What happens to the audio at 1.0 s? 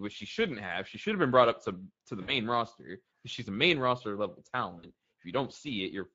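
Speex codec damage spans the whole clip, including 1.0 s: sparse CELP excitation makes the speech hoarse and grainy, with noise-like fill above 8 kHz, unlike smeared transform-codec artefacts.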